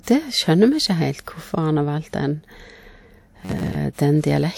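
From 3.45 to 3.77 s, robotic sound from repeated short buffers imposes a rigid 94 Hz buzz, likely from replaying roughly 11 ms chunks. A spectrogram shows fixed, evenly spaced stripes, and the waveform shows identical repeating cycles.

From 3.93 to 3.98 s, pre-echo spreads hiss over 54 ms before an attack, appearing as broadband noise smeared ahead of the onset's vertical edge.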